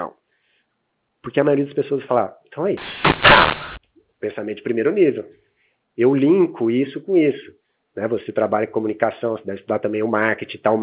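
Right after "vai falar então é", from 2.77 to 3.77 s, the speech turns harsh and gritty. This is a mu-law and A-law mix-up: bytes coded with the A-law curve of G.711 are expanded with the mu-law curve. Levels are remapped wrongly, some inflated and some shrunk, and near-silent samples jump well above zero, so the gaps hiss. The waveform looks jagged, with a raised floor between syllables. The spectrogram shows broadband distortion filling up to the 4 kHz telephone ceiling.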